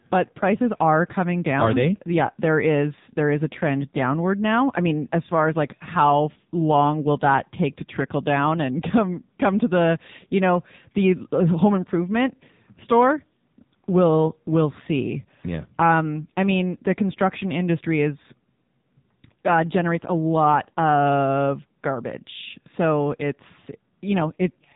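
From start to finish, the speech carries AMR narrowband mobile codec damage. Nothing above 3.8 kHz survives, so it sounds thin and phone-like. Heavy coding leaves the voice buzzy and synthetic. That points to a low bitrate, around 6.7 kbps.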